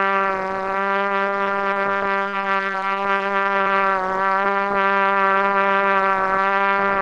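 From 1.29 to 3.21 s the sound turns choppy, with small pieces dropping out. This is repeated packet loss: over that span fifteen gaps open, none longer than 35 ms, and each is patched by stretching out the sound just before it. About 15% of the stretch is filled in this way, and roughly a quarter-second of real audio never arrives.

At 3.61 s, lasting to 3.68 s, a brief burst of packet loss produces a short held, fading smear before the sound jumps forward. Several packets in a row failed to arrive in time, so the receiver extended the last sound for about 46 ms while turning it down, and 40 ms of the original audio is skipped. The top of the spectrum stops at about 12 kHz throughout, consistent with the Opus call path at around 20 kbps.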